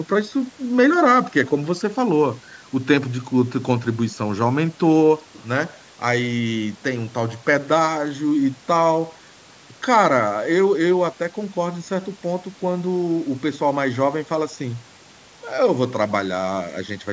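Nothing in this speech stands out as a fault, and the only things you might pick up on are the missing very lowest bass and the lack of anything above 8 kHz, which is just how call microphone processing normally shapes the sound.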